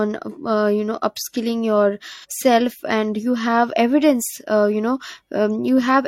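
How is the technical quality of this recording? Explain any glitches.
There's one glitch worth flagging. Right after "you know upskilling", from 2.14 to 2.26 s, there's AAC frame loss with concealment. About 85 ms went missing, which fits a couple of dropped frames. The decoder patched the gap from the last good spectrum, so you hear a brief smeared, noisy patch.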